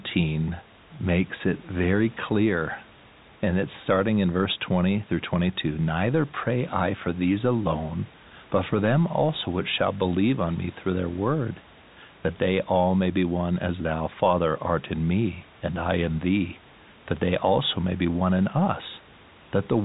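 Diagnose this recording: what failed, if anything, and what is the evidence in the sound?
Nothing in the chain has failed: the speech comes through a G.711 telephone path, limited to the band below 4 kHz with the faint level-following coding noise that format leaves, over room noise sitting about 25 dB below the voice.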